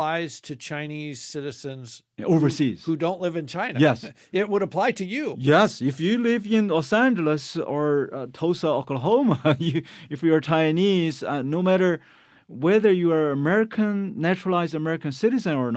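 No technical faults can be heard in this speech.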